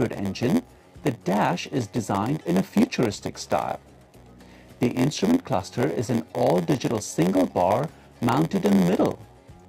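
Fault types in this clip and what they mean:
Block size mismatch (padded): zero-filled gaps in every block cause an 86.1 Hz buzz, fitting 512-sample reads; audio runs at 0.938 speed, with regular dropouts in the waveform and vertical stripes on the spectrogram.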